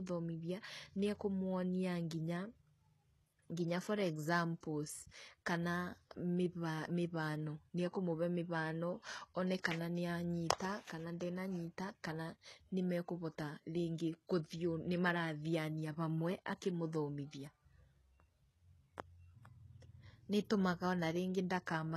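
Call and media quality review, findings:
Treble gritty, metallic throughout; s sounds lispy, nothing above 12.3 kHz. Likely HE-AAC compression, low bitrate near 16 kbps; replicated upper bands misaligned with real harmonics.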